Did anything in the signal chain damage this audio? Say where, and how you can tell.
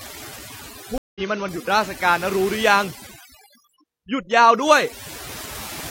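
Yes. Overdone noise removal throughout, at the call-processing stage: bands near the noise estimate are gated off, so the background drops and breaks up into twinkling specks.

A stream reconnect from 0.98 to 1.21 s, at the network stage: 175 ms of silence, then a fresh decoder resumes the speech slightly later than it left off.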